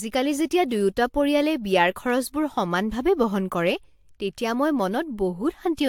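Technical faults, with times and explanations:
Throughout, generation loss: the speech sounds swirly, hollow and smeared, with blurred attacks and nothing above 19.2 kHz, likely from about five successive AAC re-encodes.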